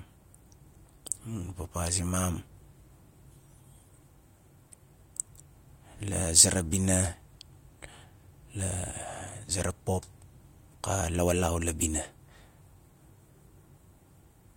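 Nothing goes wrong anywhere in this bit of speech, so there's really no technical fault to point to at any moment.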